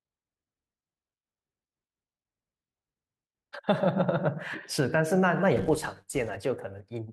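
A filter restarted on every block from 5.57 to 6.37 s, so each block's opening transient makes a 200 Hz buzz tracking the speech level.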